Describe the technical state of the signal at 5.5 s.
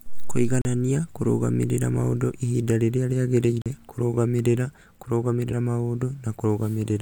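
A skip from 5.48 to 5.52 s, where the speech jumps forward by about 50 ms. These are compressed frames skipped: whole coded frames went missing or were rejected by the decoder.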